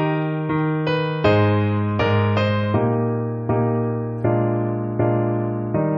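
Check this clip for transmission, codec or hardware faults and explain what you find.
A hardware fault appears near the end. From 3.60 s to the end, video or display buzz: a screen or video cable couples its 60 Hz field rate into the audio, giving a buzz with hash, roughly 30 dB below the signal. On a spectrogram it shows as stacked 60 Hz harmonics.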